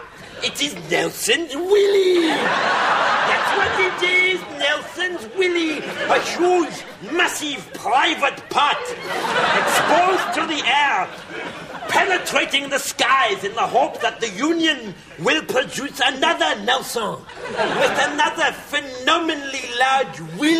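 No faults are audible anywhere in the recording.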